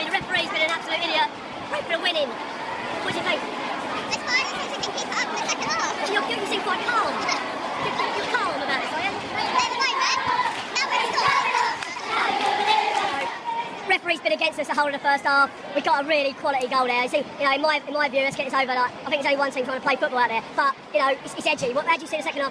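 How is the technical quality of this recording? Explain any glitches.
The recording has one fault, present throughout. Wrong sample rate: playback runs 1.38 times too fast, raising pitch about 5.5 semitones, which fits 16 kHz audio played unconverted at 22 kHz.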